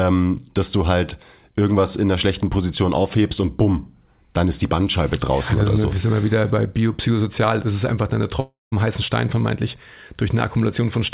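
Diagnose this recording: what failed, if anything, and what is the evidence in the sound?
At the network stage, a long network dropout is the likely cause of the break from 8.40 to 8.74 s. The last sound drags on as a fading buzz, then drops to near silence, and about 0.32 s of audio never returns. Brief packet loss would stay masked; here concealment runs out.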